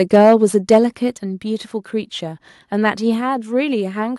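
From 0.13 to 0.35 s and again from 0.70 to 0.78 s, the loudest peaks sound harsh and crackly, with their tops flattened by about 4 dB. This is likely microphone overload driving the converter past its limit. At 0.16 s and 1.17 s, the speech and background suddenly drop by about 2 dB and then about 5 dB. This likely comes from the call software stepping the microphone volume down after detecting clipping.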